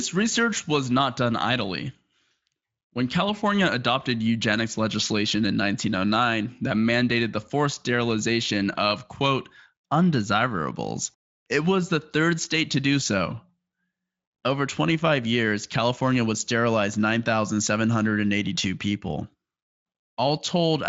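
No technical faults are audible.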